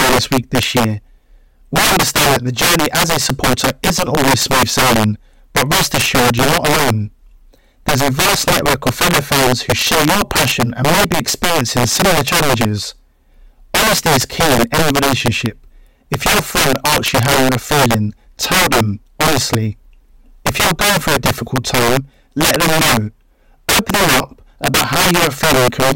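A speech recording with integer overflow running through its whole length: the gain is pushed about 14 dB too hot, and instead of being limited, every peak that exceeds full scale wraps around to the opposite sign. Around 7 percent of samples are affected, so loud syllables break into violent cracks far harsher than clipping. The waveform shows peaks jumping abruptly from top to bottom rail, and the spectrogram shows bright vertical broadband streaks at each loud moment.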